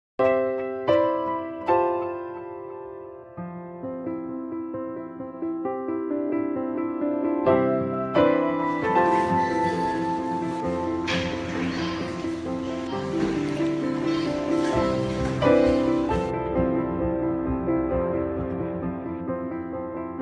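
No technical faults are audible anywhere in this audio.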